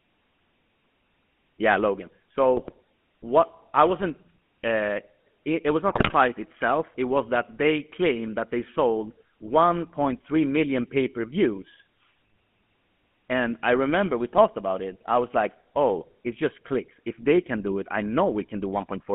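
Throughout the speech, the sound carries the GSM full-rate codec. It is confined to a line band of roughly 150 Hz to 3.4 kHz, and the rough, buzzy texture fits the 13 kbps GSM full-rate coder. That coder rebuilds the voice from a vocal-tract filter driven by a coarse, sparse pulse excitation, so voiced sounds come out gravelly. On a spectrogram the energy stops sharply near 3.4 kHz with nothing above, and harmonics look smeared and grainy rather than clean.

From 2.54 to 2.73 s, just before "what I wasn't", GSM bit errors break up the sound. At about 2.6% bit errors, corrupted filter, pitch and gain parameters distort the decoded frames, producing a short burst of squawks and gargling. The 0.18 s span fits roughly nine 20 ms frames. From 5.90 to 6.14 s, right after "it it was", a heavier burst at about 4.9% errors lasts 0.24 s, consistent with about twelve frames. On a waveform each burst shows abrupt frame-sized jumps in level, and a spectrogram shows blocky, misplaced energy bands.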